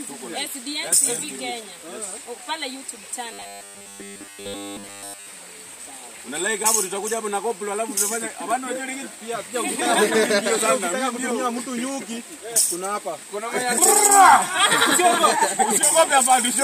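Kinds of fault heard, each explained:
Robotic sound from repeated short buffers: from 3.33 to 5.27 s the sound turns into a rigid, metallic buzz locked at 100 Hz, which fits a segment of about 10 ms being replayed over and over. The likely cause is new audio arriving too late, so the player keeps looping the last short buffer while the real material in that stretch is skipped, and essentially the whole stretch consists of these repeats.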